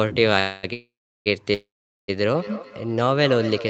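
Call audio freezes at 0.39 to 0.65 s, 0.73 to 1.28 s and 1.54 to 2.10 s, likely from late packets draining the jitter buffer. Each stretches the last sound into a fading buzz, and the last two fall silent for about 0.37 s and 0.43 s before the audio resumes with nothing lost. From 2.35 s to the end there is feedback echo between two devices: the sound returns about every fifth of a second, peaking about 13 dB below the speech, and each repeat is thinner and more ringing.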